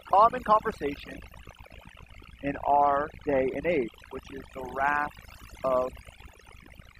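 Switching spikes from a dimmer, rectifier or unshielded line get in twice per 60 Hz cycle, so a raspy mains buzz rich in harmonics sits roughly 10 dB under the speech from start to finish. Overdone noise removal cuts frequency bands near its noise estimate far down or off throughout, so the background breaks into twinkling, warbling specks and quieter parts of the voice are cut away with them.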